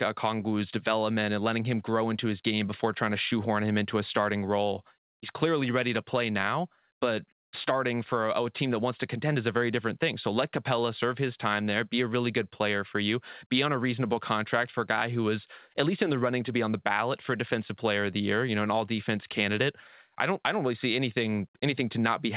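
No technical faults can be heard in the speech, which has come through a call path with nothing above 4 kHz, pointing to a narrowband telephone codec such as G.711 mu-law, and that path is working as it should.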